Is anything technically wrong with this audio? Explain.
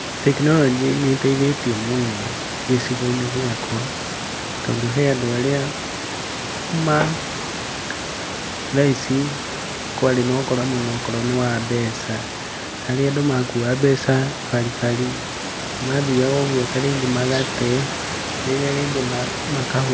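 No, nothing here is technically wrong with the speech. The sound stops at about 8 kHz, as expected from the microphone processing of a call and a wideband G.722 call codec at 64 kbps, and the room's background noise sits about 11 dB below the speech.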